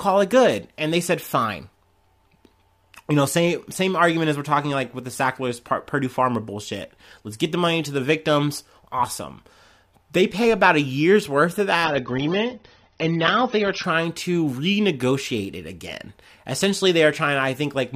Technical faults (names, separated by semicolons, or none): adaptive stream at a lower bitrate